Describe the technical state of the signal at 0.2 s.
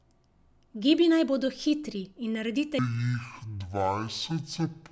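At 0.2 s the speech signal is intact, with no audible technical fault at that moment.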